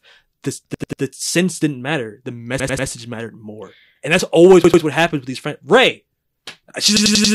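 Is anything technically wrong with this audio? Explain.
Yes. The speech has a repeated buffer fault in four places: 0.74 to 1.02 s, just before "sense didn't matter"; 2.60 to 2.88 s, before "mattered more"; 4.64 to 4.83 s, between "that's always" and "what happens with these"; and 6.97 to 7.34 s. New audio arrived late, so the device replayed its last 93 ms chunk, which fits a 4096-sample buffer. The chunk sounds three, three, two and four extra times, each repeat starting with a hard join, giving an audible stutter.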